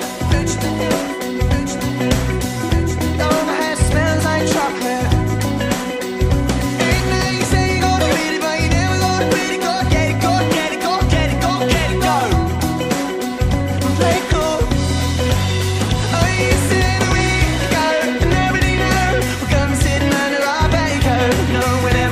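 No faults detected in this audio.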